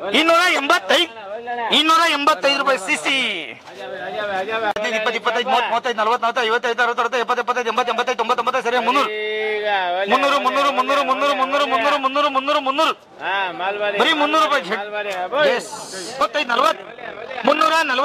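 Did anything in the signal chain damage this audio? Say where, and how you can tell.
Yes. At the codec, corrupt frames were decoded at 0.51–0.59 s, 11.78–11.81 s and 17.41–17.44 s. Damaged bits produced chirpy bursts at the wrong frequencies, visible as brief vertical smears on a spectrogram.

At a frame-based processing stage, overlap-add ripple runs from 16.44 to 17.72 s. Windows not summing to constant gain make the level flutter about 40 times a second, about 11 dB deep, giving a scalloped waveform envelope.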